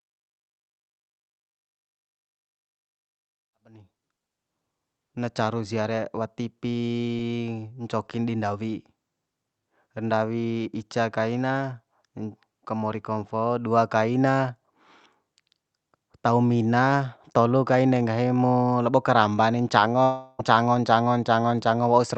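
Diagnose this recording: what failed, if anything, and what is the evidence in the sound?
A long network dropout, at the network stage, is the likely cause: no packets reached the receiver from 20.03 to 20.41 s, just after "mo labo karamba ni". The decoder stretched the last sound into a fading buzz across the gap, so about 0.36 s of speech is simply missing.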